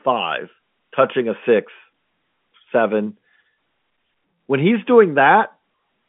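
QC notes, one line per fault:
No faults heard; the speech sits in a 150 Hz to 3.5 kHz line band with nothing above 3.7 kHz, consistent with G.711 A-law telephone coding at 64 kbps.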